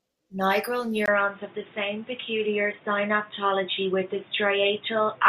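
At 1.06 s, after a 20 ms gap, the speech turns dull and boxy at much the same loudness, with nothing above 3.7 kHz and faint new background noise. The likely cause is the input switched to a poorer device; the gap and new noise rule out a simple filter.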